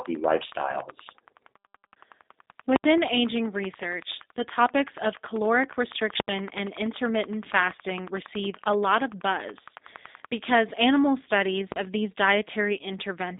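G.729 codec damage runs throughout: the speech sits in a narrow 250 Hz to 3.7 kHz line band and sounds rough and synthetic, which fits G.729A at 8 kbit/s.

Invalid numbers at full scale strike at 2.76 to 2.84 s and again at 6.2 to 6.28 s. Each time, a calculation blew up and pinned the output at one extreme value, far beyond the speech peaks, for 80 ms, heard as a loud pop at each edge with no sound between.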